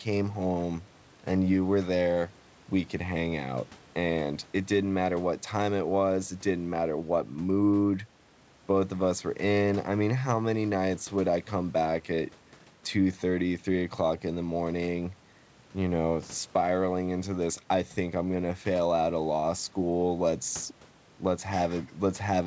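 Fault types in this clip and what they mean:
Nothing to flag in this speech clip; it's just the ordinary sound of a call, where the content stops around 8 kHz, which fits a wideband codec such as G.722.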